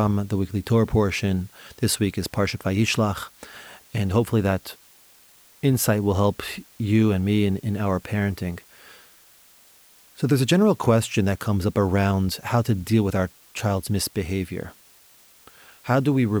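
A steady, even hiss sits under the speech from start to finish, never changing in level and without any crunchy or gritty distortion on the voice. It sits around 30 dB below the speech. That is low bit depth with dither, which fits 8-bit quantisation: dither added before rounding to so few levels turns the rounding error into constant white noise instead of distortion that would follow the signal.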